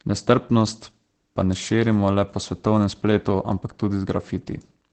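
Speech clip with Opus voice compression throughout: nothing above about 8.5 kHz, and hoarse, slightly robotic texture, consistent with wideband SILK coding near 12 kbps.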